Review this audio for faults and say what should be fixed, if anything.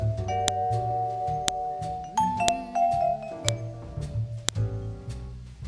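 Sharp clicks at 0.48, 1.48, 2.48, 3.49 and 4.49 s, one per second: a file header played as audio, unstripped WAV header bytes, seen as full-band vertical spikes. Strip each piece's header before joining or streaming.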